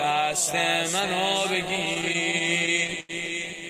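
From about 1.85 s to 3.11 s the audio hits a run of repeated stalls, a classic stutter. Packets kept turning up late, so the jitter buffer drained over and over, sixteen times in that stretch, and the receiver patched each hole by stretching out the last bit of sound. That padding adds up to roughly 237 ms, about a fifth of the span, with the longest hold at 87 ms. Nothing actually drops out, but the sound drags and hiccups through there.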